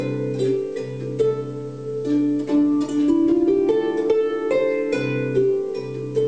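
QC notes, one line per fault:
Nothing to flag here; I listened all the way through and didn't hear a single problem worth a QC line.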